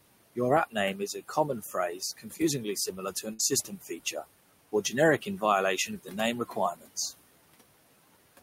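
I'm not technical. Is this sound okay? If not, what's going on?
No, there are a few problems here.

All the way through, the background hiss ducks away in the pauses and creeps back up under the talking. These are noise suppressor artifacts: a filter meant to remove steady background noise is turning parts of the sound down many times a second, and it cuts the room noise heavily between phrases. That room noise itself is a real part of the recording, sitting well below the speech.

In three stretches the same filter also bites into the speech: between about 0.7 and 4.2 seconds, between 4.7 and 5.4 seconds, and between 5.9 and 7.0 seconds. This is speech cut by the noise suppressor. Soft consonants and the ends of words sound swallowed or faint, because the filter mistook them for background noise. In total about a second is affected in the first stretch, a brief moment in the second, and somewhat under half a second in the third.

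From 2.37 to 2.41 seconds there is a tiny smear or wobble. This is a short concealed packet loss. About a fiftieth of a second of the call arrived too late to be played. The receiving end covered the hole by stretching the sound just before it and then blending back into the real audio, so a very short sound may have disappeared.

From 3.33 to 3.41 seconds there is a larger version of the same thing, a burst of packet loss. Around sixty thousandths of a second went missing in a row. The receiver filled the gap by holding the last sound and letting it fade, so you hear a brief buzz or fading hiss. The speech then picks up a little further on, with that small piece gone.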